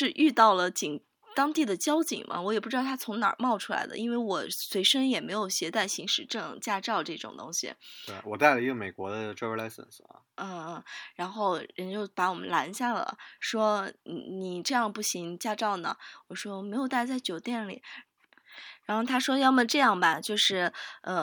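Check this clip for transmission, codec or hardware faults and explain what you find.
No faults can be heard anywhere in this speech.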